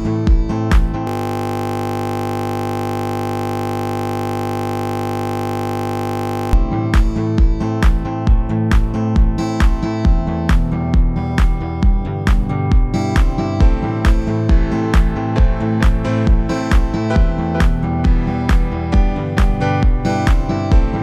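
From 1.07 s to 6.53 s the audio locks into a system hang loop: a 20 ms fragment repeats exactly, giving a steady 50 Hz buzz. Unlike mains hum, the buzz replaces the sound entirely, because playback kept cycling one ring buffer while the system froze.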